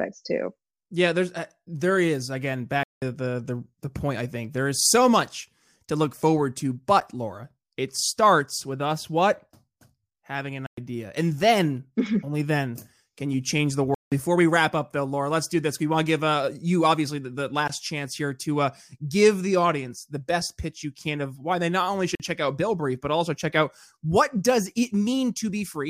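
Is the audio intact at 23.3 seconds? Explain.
Yes, the speech at 23.3 seconds plays through cleanly, with no dropout, glitch or other fault at that moment.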